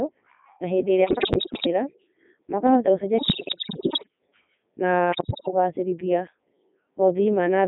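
Codec 2 vocoder runs across the whole speech clip, which points to about the 3.2 kbit/s mode, band-limited to roughly 250 Hz to 3.7 kHz. Only pitch, voicing, energy and a spectral envelope survive, so the decoder rebuilds the voice from sine waves, giving a buzzy, robotic, heavily damaged sound. Bit errors on digital voice radio strike from 1.04 to 1.67 s, 3.18 to 4.08 s and 5.12 to 5.48 s. At a bit error rate of roughly one in seven, corrupted frame parameters make the synthetic voice lurch in pitch, level and tone colour, collapsing into bleeps, warbles and gibberish.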